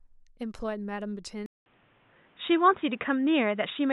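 At 1.46 s the speech goes silent for 200 ms, then stays boxy to the end, with nothing above 3.8 kHz, a level shift of around 5 dB and new faint noise. The input likely switched to a poorer device. A spectrogram shows a gap, then a flat ceiling.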